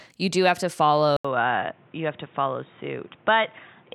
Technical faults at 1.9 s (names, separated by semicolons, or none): input switched to a poorer device